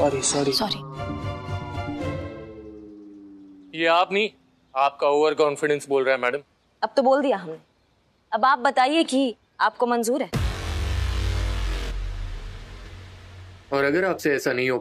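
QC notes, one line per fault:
0.62 s, underrun with held sample: a tiny 1.33 ms flat spot that stops the sound. The output buffer ran dry, so the converter held its last value. The gap is 64 samples, and roughly 1.5 ms of live audio was lost.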